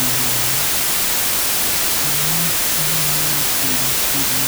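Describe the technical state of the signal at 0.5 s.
A wrong sample width fault is present at 0.5 s and runs through the whole clip. Speech stored as 32-bit integers is being read as 16-bit integers, so each original sample splits into two values. One carries the real signal's upper bits, and the other holds low-order bits that act as loud noise. The doubled sample count plays at half speed, an octave low, with the speech buried under heavy noise.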